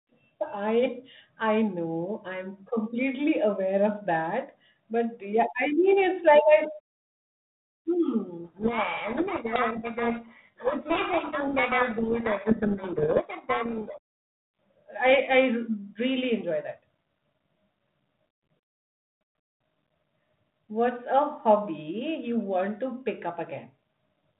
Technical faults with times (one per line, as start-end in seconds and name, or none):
8.44-13.98 codec payload misread